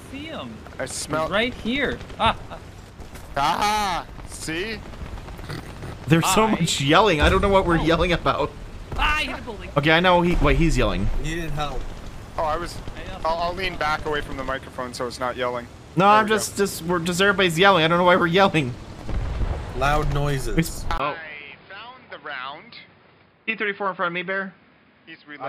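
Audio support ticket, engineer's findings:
Input switched to a poorer device at 20.98 s: 20 ms gap, then band capped at 5.1 kHz, about 5 dB quieter, new noise floor; likely a narrower-band capture device.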